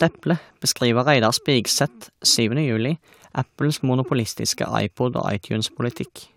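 At 0.62 s a bit error spike interrupts the speech: one sample jumps to about -24 dBFS and falls straight back, which points to a single flipped bit in memory or on a digital link. It is heard as one bright, full-band tick with no link to the voice around it. Unlike a dropout or buffer glitch, nothing goes missing and the audio carries on uninterrupted, and there are no repeats.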